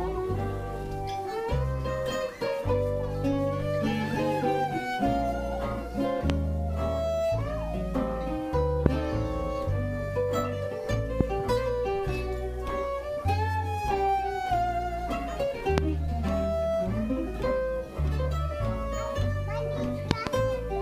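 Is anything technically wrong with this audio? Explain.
Yes. Loud pops occur at 6.30, 8.86, 11.21 and 15.78 s, each about 20 ms long, and a double pop runs from 20.11 to 20.29 s. Each is a sharp thump peaking around 20 to 25 dB above the surrounding sound, which continues underneath. A sudden voltage step or pulse, likely from a switch, connector, static discharge or driver glitch, entered the signal path, and the downstream circuitry shaped it into a brief transient.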